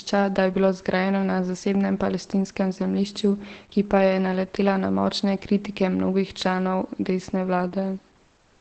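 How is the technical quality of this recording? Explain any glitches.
The technical quality is poor. The speech is heavily degraded from start to finish by Opus compression, most likely from the codec's speech (SILK) mode at a very low rate, which fits something around 12 kbps. Nothing survives above 8.5 kHz, so the voice sounds muffled, hoarse and thin. SILK models speech coarsely and drops the upper band entirely. On a spectrogram, energy stops at a flat ceiling near 8.5 kHz across the whole clip, with smeared, blurry harmonics below it.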